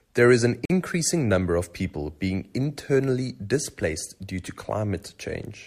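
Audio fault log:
0.65–0.70 s, gap between stream segments: mismatched segment timestamps leave a hole that the player fills with silence, cutting the speech with hard edges for about 46 ms.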